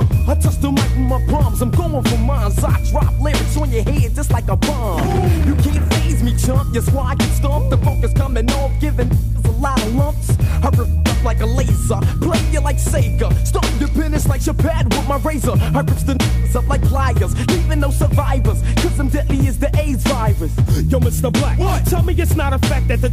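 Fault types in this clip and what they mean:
Clock drift buffer slips: a regular tick every 0.72 s from 0.53 to 22.97 s, likely two unsynced clocks making the buffer drop or repeat a few samples.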